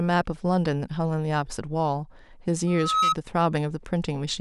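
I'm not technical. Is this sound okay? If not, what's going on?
No. From 2.67 to 3.15 s, a piercing whistle at about 1.3 kHz swells up over roughly a third of a second and rings louder than the speech. This is loudspeaker feedback squeal: the microphone picked up its own loudspeaker, and that pitch kept amplifying itself.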